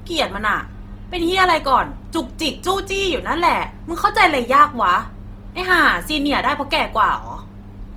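A speech clip that sounds grainy and rough throughout, with a noisy texture on the voice; this is likely Opus compression in its music mode at a low rate, around 24 kbps.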